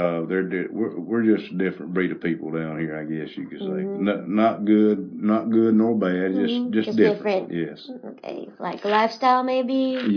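No technical faults can be heard anywhere in the recording, and the signal holds steady throughout.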